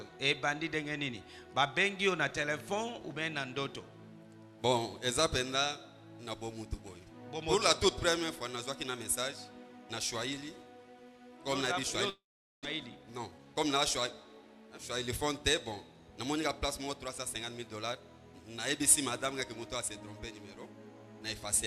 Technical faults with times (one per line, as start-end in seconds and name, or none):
12.09-12.67 long network dropout
12.75-13.95 jitter buffer speed-up